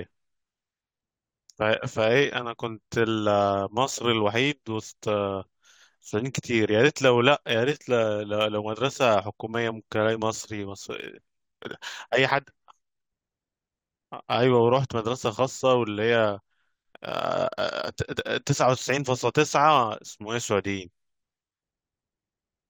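Throughout the speech, sample clock jitter adds a fine hiss that swells on loud, bright syllables and disappears in pauses. The converter clock wanders by a few microseconds, leaving an error about 30 dB below the signal. Unlike a steady noise floor, it tracks the waveform's slope.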